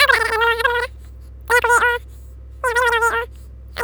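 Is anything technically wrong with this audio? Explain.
Yes. Wrong sample rate, throughout: the speech plays 2.76 times too fast and 17.6 semitones high, consistent with 16 kHz audio played unconverted at 44.1 kHz.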